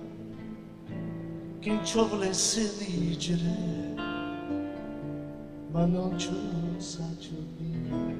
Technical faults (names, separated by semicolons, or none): overlap-add ripple